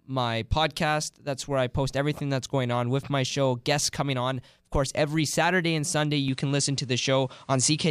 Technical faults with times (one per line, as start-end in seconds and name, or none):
6.28-7.90 input switched to a poorer device